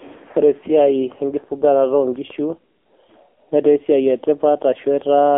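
AMR narrowband mobile codec damage runs through the whole speech clip: the sound is confined to a 300 Hz to 3.5 kHz telephone band with nothing above 3.7 kHz, and the heavy buzzy, synthetic coloration fits a low AMR-NB mode of about 6.7 kbps.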